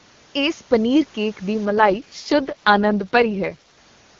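A short speech clip carried over an AMR wideband (HD Voice) link, clean at first, then an AMR rate drop from about 1.66 s to 3.78 s. The bandwidth holds and nothing cuts out, but the voice turns rough, raspy and synthetic, the way it does when the network pushes the codec down to its lowest rates to spend bits on error protection. The grain fits a fall from 23.85 to around 6.6 kbit/s, and it clears once the rate recovers.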